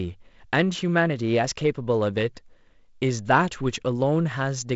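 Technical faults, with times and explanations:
No technical faults detected.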